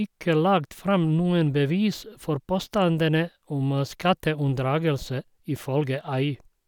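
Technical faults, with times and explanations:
No technical faults can be heard in this speech.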